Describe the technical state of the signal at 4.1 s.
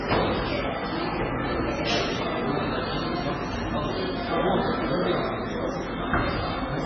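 At 4.1 s you're hearing the same damage that runs through the whole clip, which is likely MP3 compression pushed hard. Everything above about 7.6 kHz is simply gone, so the top end sounds dull and boxed in. With so few bits to spend, the encoder keeps dropping weak frequency lines and bringing them back frame to frame, giving that watery, swirly texture and smeared attacks. It fits a very low bitrate, somewhere around 16 kbps.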